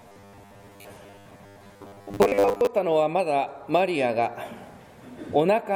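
From 0.01 to 2.67 s the sound turns into a rigid metallic buzz locked at 100 Hz: robotic sound from repeated short buffers, likely from a 10 ms block being replayed whenever fresh audio arrived late. Most of the material is overwritten by repeats, yet the buzz still tracks the sound's rough shape, unlike a steady hum.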